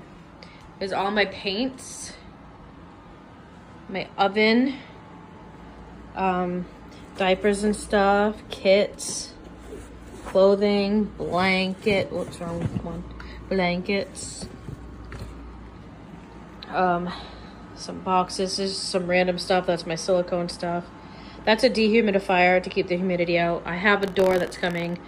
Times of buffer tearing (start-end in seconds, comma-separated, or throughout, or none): 24.01-24.94